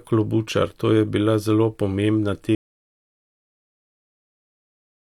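Speech recording with an audio dropout to silence starting at 2.55 s and running to the end of the clip. The sound cuts off abruptly mid-flow and is replaced by silence, with no room tone or noise floor remaining, so nothing after that point is recoverable. The likely cause is a lost input, such as a disconnected device, a failed link or an accidental mute, while the recorder kept writing empty samples.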